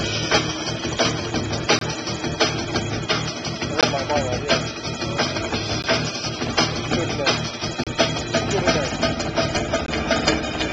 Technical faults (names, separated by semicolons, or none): gap between stream segments